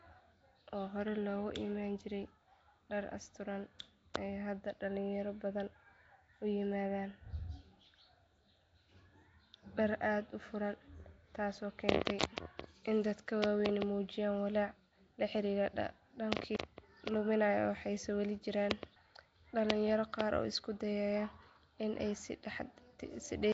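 Throughout the speech, a rough, hissy haze and a smeared, underwater quality point most likely to Nellymoser compression at a rate fitting 32 kbps. Empty bands are refilled with noise. A spectrogram shows speckled, blocky texture and nothing above 7.7 kHz.

At 4.14 s, just after "dhar asturan", pre-echo appears. Coding noise from a sharp attack spreads into the quiet moment before it, giving a brief hiss about 12 ms early. On the waveform, fuzz precedes the onset, and the spectrogram shows a smear ahead of the attack.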